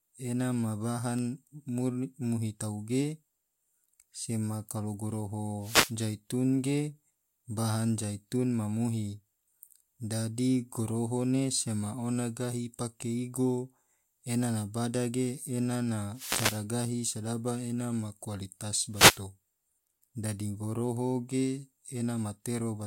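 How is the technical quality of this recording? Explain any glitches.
The speech has three wireless microphone noise hits. At 5.60 to 5.95 s, just before "zaitun ge", at 16.12 to 16.65 s, after "bada ge ena na", and at 18.91 to 19.21 s, after "sedaba ena ma kualitas", the radio link fades. Receiver noise swells into a brief swish of static over the voice.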